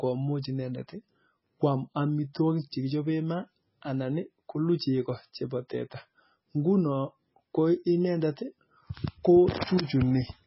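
From start to finish the speech carries heavy codec damage, likely MP3 compression at a rate near 16 kbps: nothing survives above 5.6 kHz, and weak detail flickers in and out, giving a watery swirl and chirpy s sounds that a plain low-pass filter would not add.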